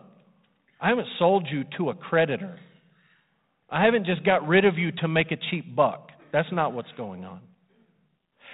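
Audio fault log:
No faults heard.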